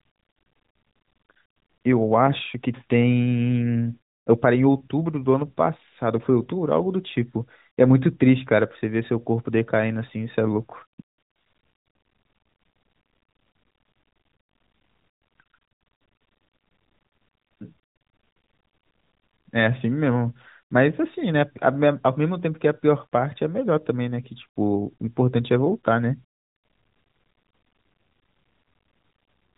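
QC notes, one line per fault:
No faults to note in this speech clip.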